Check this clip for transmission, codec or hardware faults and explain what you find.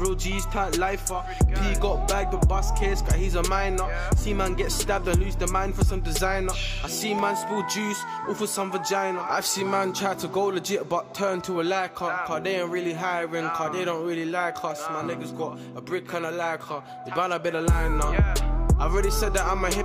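There's one fault, and it's a tiny one: a block of digital silence at 7.19 s. For about 0.29 ms the sound drops straight out and then jumps back, with no fade either way. That points to the output buffer not being filled in time, leaving a few zeroed samples in the stream. A hole that short can't be heard as a gap, so the abrupt edges come across as a single small tick.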